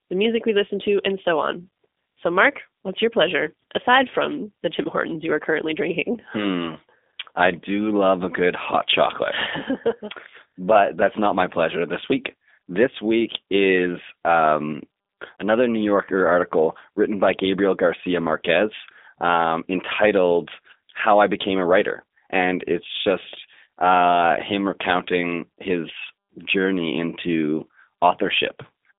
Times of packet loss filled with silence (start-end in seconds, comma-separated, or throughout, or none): none